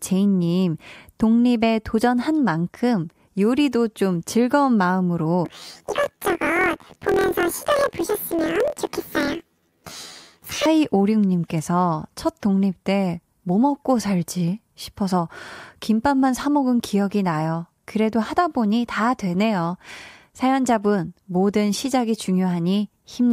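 Speech clip with planar audio read as interleaved from 5.45 to 10.66 s. Each 24 ms block of left-then-right samples is taken as alternating pairs, so every block plays twice at double speed, shifting the sound up an octave with a robotic 41.7 Hz buzz.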